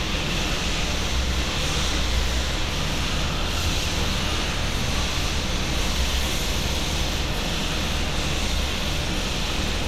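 No technical faults occur anywhere in the recording.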